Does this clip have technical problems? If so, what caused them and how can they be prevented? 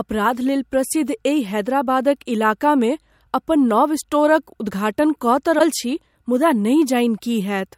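Yes. From 5.58 to 5.61 s the speech skips forward with a brief glitch. The likely cause is a broken MP3 bit reservoir. Frames were dropped, so the next frame read borrowed bits that were missing. The glitch lasts about 28 ms, and the frames are 24 ms long. Prevent it by transmitting complete MP3 frames.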